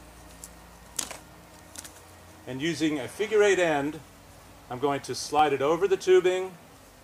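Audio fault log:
3.11 s and 5.39 s, dropped buffer (overrun). Each spot gives a small jump in the sound and no gap of silence. A tiny slice of audio is missing, a millisecond or two at 3.11 s and a few milliseconds at 5.39 s. The likely cause is that the program read its input too late, so the hardware overwrote those samples. The edges on either side then meet directly.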